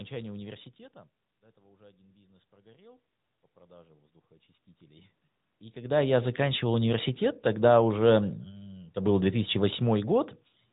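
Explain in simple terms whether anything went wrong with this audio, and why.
The speech went through an AMR narrowband mobile codec for the whole clip, which cuts everything above 3.8 kHz, leaving the voice muffled and plainly buzzy.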